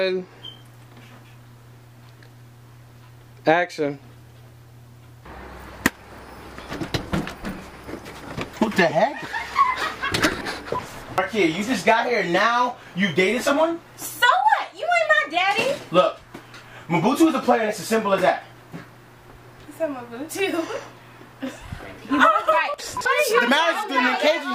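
The capture path appears to have fallen behind at 6.19, 8.53, 10.41, 11.18 and 22.74 s, likely a dropped buffer (overrun), so each time a short stretch of audio, from a few hundredths to about 0.15 of a second, is lost. The sound jumps abruptly ahead with no gap.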